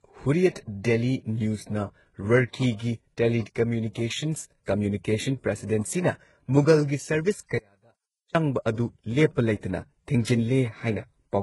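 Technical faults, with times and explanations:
Throughout: transcoding between lossy codecs. The speech carries layered artefacts, with smeared, swirly high band detail from a low-rate band-replication codec overlaid with the pre-echo and warble of a second encode. This likely points to a very low-rate HE-AAC pass re-encoded as Vorbis. On a spectrogram, nothing appears above 11.5 kHz, and there is patchy, blocky texture below that cut-off.
7.58 to 8.35 s: audio dropout to a faint residue. For about 0.77 s the speech collapses abruptly to a faint leak far below normal level, roughly 35 dB down, then returns mid-flow. The likely cause is the signal dropping while the downstream path stayed live. The waveform shows a sudden near-flat stretch with hard edges, not a tapering fade.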